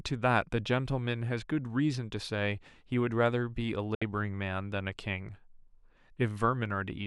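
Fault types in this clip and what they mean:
digital broadcast dropout: The receiver stopped getting valid frames and muted until good ones returned. At 3.95 s the speech fades out over 3 ms into a silent gap of 64 ms, which fits two lost frames, then resumes at 4.02 s with that stretch gone.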